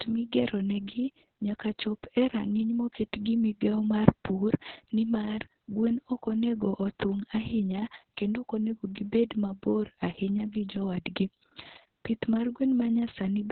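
From start to finish the speech carries heavy Opus voice compression. Nothing remains above about 4.3 kHz, so the voice sounds boxed-in and telephone-like, and the coarsely coded excitation makes it hoarse, buzzy and faintly robotic, which fits a narrowband SILK stream at roughly 6 kbps. A simple low-pass filter would only muffle the voice. Here the voice itself is roughened as well, which points to a starved speech codec rather than band-limiting alone.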